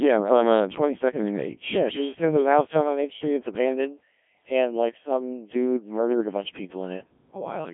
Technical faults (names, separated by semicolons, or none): Codec 2 vocoder